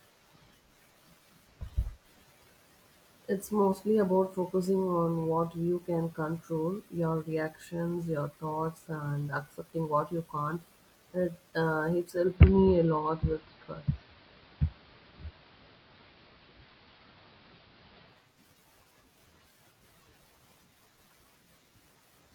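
It's a speech clip, and from 12.05 s to 18.40 s you can hear digital radio blending to analogue: the receiver lost the digital stream and cross-faded, over about 0.38 s, to the AM broadcast of the same station, then came back. While it's on AM, a faint hiss sits well under the speech, and the level shifts by about 5 dB.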